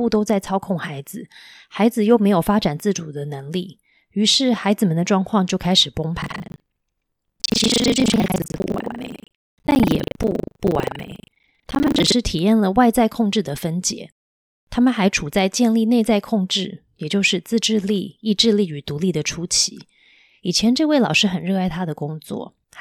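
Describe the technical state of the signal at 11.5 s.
At 11.5 s the writer filling the ring buffer and the hardware reading it have slipped out of step, so the two cross partway through every period. That is buffer tearing, running from 6.2 to 12.14 s. Roughly two fifths of each buffer replays speech from about a tenth of a second earlier, butted against current audio with hard joins. The result is a robotic rattle at 25 Hz, which fits a 40 ms buffer period, and it is heard only while speech is present.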